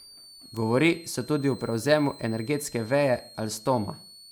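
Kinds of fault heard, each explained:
Switching supply whistle: A thin high whistle drifts between about 4.1 and 4.6 kHz, well below the speech, from a power supply running in audible burst mode or beating with another.
Bit error spike: Two isolated sharp ticks at 0.57 s and 3.57 s, the second just after "energetske veje", each from one flipped bit in a single sample.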